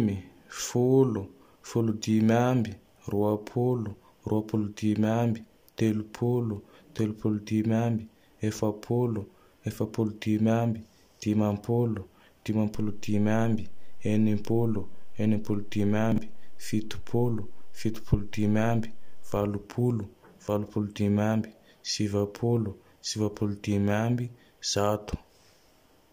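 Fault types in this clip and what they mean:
DC step: The signal's zero line abruptly shifted at 12.75 s, the kind of jump a converter recalibrating or an offset input being switched in would cause. The offset held until 19.37 s. The jump is heard as a low thump or click at 12.75 s, while the speech carries on unchanged through the displaced stretch.
Chunks out of order: In two places, a 20 ms block of audio was delivered or written late and plays after blocks that should have followed it. At 16.12 s it lands two blocks late, and at 20.66 s, just before "dimy ambe sivapolo sivapolo", it lands one block late. No audio is lost, but each reordering creates three hard joins, heard as a quick garbled moment that briefly jumbles the speech.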